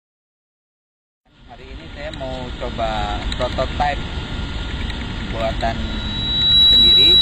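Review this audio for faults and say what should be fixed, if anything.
From the start to 5.72 s the clip plays as an adaptive stream starting at a low bitrate. The top end is missing, with nothing above 14.6 kHz, and codec artefacts are stronger until quality steps up at 5.72 s with no gap. The sound fits a player opening on a low-rate HE-AAC rendition near 24 kbit/s, then switching to AAC-LC near 96 kbit/s once it had measured the connection. To prevent this, start playback on a higher rendition or buffer slightly longer before playing.

From 5.83 s to the end of the clip there is a loudspeaker feedback squeal: a single tone at 3.9 kHz that swells over roughly 0.7 s to around 15 dB above the programme. A microphone is picking up the loudspeaker it feeds, and at 3.9 kHz the loop gain exceeds one, so that frequency keeps building on itself. To prevent this, reduce the loop gain at 3.9 kHz with a notch filter, lower monitor level, or reposition the microphone and loudspeaker.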